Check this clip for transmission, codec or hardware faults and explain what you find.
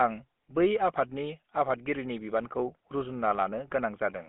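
One codec fault runs through the whole clip: the speech has passed through the GSM full-rate codec. The codec rebuilds the voice from a vocal-tract filter driven by a decimated pulse excitation, which fits a 13 kbps full-rate stream. That coarse excitation gives the plainly audible buzzy, gravelly roughness. The line band runs from about 200 Hz to 3.4 kHz, and nothing is present above 3.8 kHz, so sibilants and upper harmonics sound dull and boxy.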